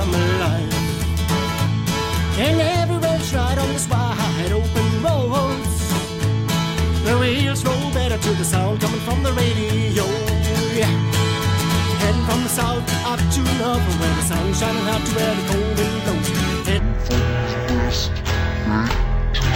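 From 16.79 s to the end at 19.56 s, the sound drops to exactly half speed and a full octave lower: stereo read as mono. The left and right samples, which alternate in the stream, are played back-to-back as one channel, so each moment takes twice as long. A sample-rate mismatch also slows and lowers audio, but by an arbitrary ratio. Here the ratio is exactly 2:1, and a faint mirrored copy appears in the upper spectrum.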